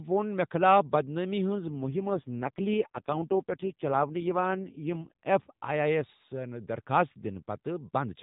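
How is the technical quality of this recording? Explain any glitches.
The recording is narrowband mobile speech with one glitch. The light AMR narrowband mobile codec coding leaves nothing above 4 kHz, but outside the glitch the voice keeps its normal clarity for that band.

An AMR rate drop runs from 1.50 s to 5.12 s. On a weakening radio link, the network told the encoder to spend fewer bits on the voice and more on error protection. The roughness suggests a fall from 12.2 kbps to the lowest 4.75 kbps mode. The bandwidth holds and nothing cuts out, but the voice turns buzzy and synthetic until the rate recovers.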